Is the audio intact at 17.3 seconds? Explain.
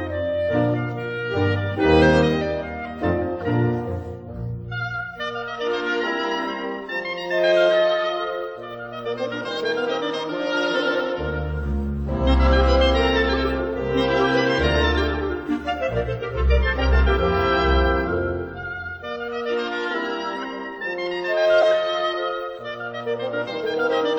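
No. MP3 compression damage runs through the whole clip, including 17.3 seconds. It likely comes from a low-bitrate encode, which fits about 64 kbps. Short of bits, the encoder cuts the treble and drops weak frequency lines, so the audio sounds watery and swirly, with smeared attacks.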